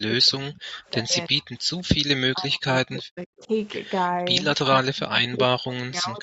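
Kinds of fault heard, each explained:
speech suppressed in double talk: The speech sinks sharply and breaks up in three long stretches, from the start, around 2.3 to 3.5 s and over the final 1.5 s, falling by about 40 dB at worst, likely an echo canceller muting both overlapping talkers.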